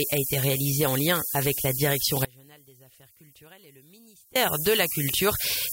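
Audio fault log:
Throughout: low bit depth with noise shaping. A steady, thin hiss that climbs sharply toward the top of the band sits roughly level with the sound itself. The audio is carried on only 5 bits, and the rounding error is pushed upward in frequency.
2.25 to 4.36 s: audio dropout to a faint residue. The sound cuts off abruptly for about 2.1 s, leaving only a faint trace about 30 dB below normal before it snaps back. The likely cause is a lost signal feed while the downstream path stayed live.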